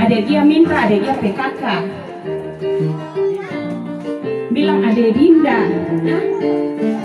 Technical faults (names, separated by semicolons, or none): none